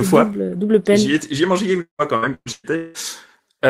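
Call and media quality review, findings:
Repeated packet loss (robotic sound), 1.81–2.97 s, right after "ai mangé". Choppy speech with pieces missing. Roughly half the span is concealment fill, and the longest hole is 182 ms. The jitter buffer or loss concealment stretches the last frame over successive losses. Unlike a single dropout, the holes recur in quick succession.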